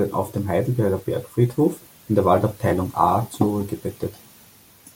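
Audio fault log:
2.69 to 2.71 s, Bluetooth stutter: a packet on the wireless link arrived late or not at all, so the receiver replayed its last buffer, a slice of about 20 ms that fits one lost packet. The speech catches briefly on that slice, then jumps ahead as though it had played on.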